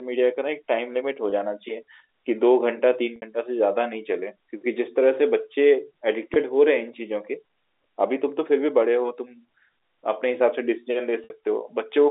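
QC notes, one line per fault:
1.30, 3.16 to 3.22, 6.34, 11.24 to 11.30 s: packet loss with pitch repetition. Brief held, buzzy tones replace 20 ms gaps at 1.30 and 6.34 s, while 60 ms gaps at 3.16 and 11.24 s fade into silence before the speech cross-fades back, consistent with one and three lost packets. The receiver loops the last pitch period across each gap within the 300 Hz to 3.7 kHz telephone band.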